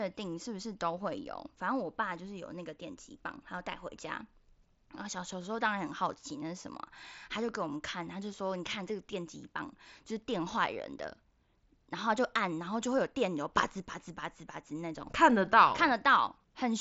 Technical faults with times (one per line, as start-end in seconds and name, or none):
none